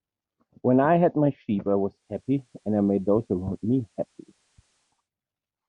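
Digital radio blending to analogue runs from 1.86 to 5.10 s. The receiver lost its digital stream and cross-faded over 348 ms to the station's FM broadcast, then back. A faint hiss, roughly 45 dB below the speech, rises, and the level shifts by about 2 dB.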